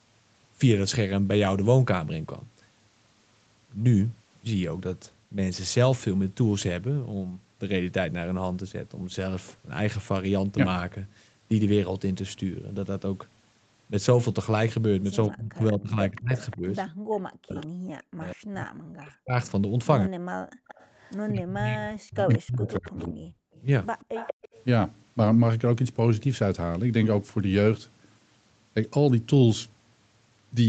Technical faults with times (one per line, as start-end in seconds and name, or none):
15.29-20.13 speech suppressed in double talk
16.16-17.66 echo leak
16.93-17.06 background gated by the echo canceller
20.41-20.67 background gated by the echo canceller
20.67-21.16 echo leak
21.30-23.34 speech suppressed in double talk
22.35-24.57 echo leak